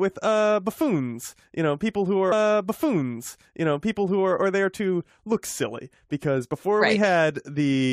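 Speech, with a stream segment repeated: from 2.31 s to 4.33 s the player jumps back and replays about 2.02 s of programme, marked by a small blip at the jump. Unlike a buffer stutter, the repeated stretch is a full segment-length passage, not short looping fragments.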